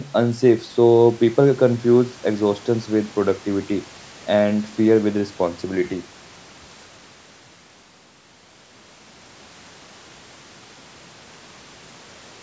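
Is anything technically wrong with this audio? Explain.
No, nothing is technically wrong with this speech recording.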